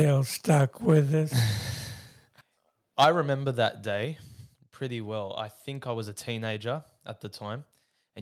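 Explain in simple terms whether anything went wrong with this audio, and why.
A couple of things went wrong, both tied to the microphone level in this speech clip.

First, there's microphone overload. Right at the start (0.00 to 0.02 s), again around 0.92 to 0.94 s, and most noticeably from 2.99 to 3.09 s, just before "remember that", the loudest moments get a harsh, crackly edge. The likely cause is the mic input being set too high, so the tops of the loudest peaks get chopped off. The one near 3 seconds is the roughest.

Second, the microphone volume stepped down three times, at 0.02 s, 3.04 s and 4.05 s. You hear the voice and the background drop in level together, suddenly, in one step. The first two come right after those crackly peaks, and the one at 3.04 s lands just before "remember that". The third comes right after "remember that". That pattern is likely the call software noticing the overload and turning the mic input down to compensate.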